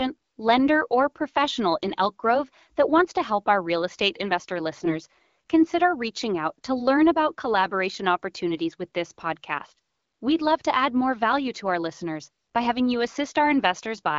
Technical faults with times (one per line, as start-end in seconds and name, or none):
4.73-4.98 AMR bit errors